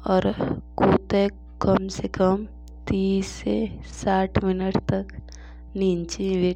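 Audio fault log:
Throughout: mains hum, a steady 60 Hz drone sitting roughly 20 dB under the speech with a few low harmonics riding on it. That's the power line leaking into the signal, probably through a ground loop or a transformer close to the gear.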